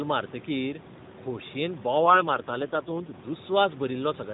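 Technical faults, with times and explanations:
2.02–3.15 s, AMR rate drop: for just over a second the speech turns rougher and buzzier, with a synthetic, reedy edge, then returns to its earlier quality. The bandwidth stays the same and nothing drops out, which points to the mobile network switching the AMR narrowband codec down from 12.2 to 4.75 kbps, most likely because of a weak radio link, so far fewer bits describe each 20 ms frame, before stepping back up.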